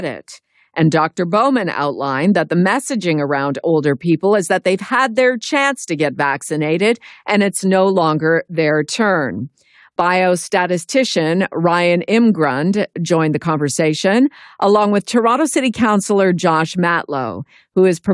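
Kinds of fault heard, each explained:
No faults heard in this recording.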